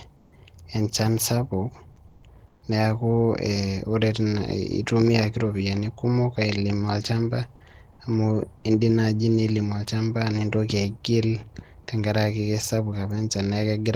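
Speech in which three brief pauses, at 0.16–0.32 s, 2.07–2.23 s and 2.47–2.62 s, carry comfort noise in place of the background: a flat, featureless hiss about 5, 2 and 6 dB quieter, seen as smooth, textureless spectrogram patches and slight waveform dips. The likely cause is Opus discontinuous transmission.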